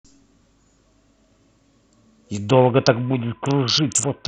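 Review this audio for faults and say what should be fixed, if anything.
From 2.50 s to the end, a Bluetooth SBC bit pool drop starves the upper sub-bands, dulling the speech and adding grit, consistent with about 54 kbps. Reduce radio congestion or hold a higher minimum bit pool so the link keeps enough bits.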